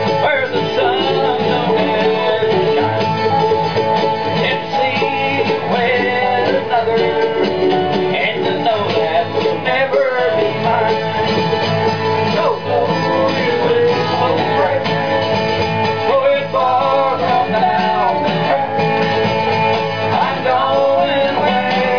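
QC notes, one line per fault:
No faults were found in the audio. Nothing in it calls for a QC entry.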